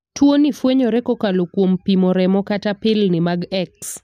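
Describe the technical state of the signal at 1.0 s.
Just before 1.0 s, at 0.96 s, the speech carries a single sharp click. The waveform jumps abruptly from one value to another with no smooth path between them. On a spectrogram it shows as a thin vertical line across all frequencies. The likely cause is dropped samples. A tiny fraction of a millisecond of audio appears to be missing. That is far too little to remove any sound, so only the discontinuity itself is heard.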